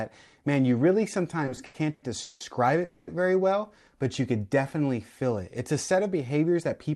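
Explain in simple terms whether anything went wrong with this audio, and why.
Between 1.45 and 2.42 s the speech hitches six times in under a second. That's repeated stalls (stutter). The audio arrived late, so the player kept stretching the last bit of sound to fill the holes, about 410 ms in all, the longest nearly 0.2 s. Nothing is lost, but it drags.

At 2.84 s there's a call audio freeze lasting about a quarter of a second, to 3.09 s. The last sound hangs on instead of going silent. The likely cause is packets held up in transit, so the buffer ran dry and the speech resumed 230 ms late.

From 5.90 s to 6.91 s you get a jitter buffer speed-up. To claw back that built-up delay, the receiver snipped out tiny slivers, roughly a tenth of a second altogether, so the speech runs about 10% faster. The pitch stays the same, so it just sounds a bit rushed.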